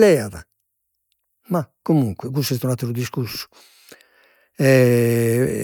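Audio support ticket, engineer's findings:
No faults found on listening.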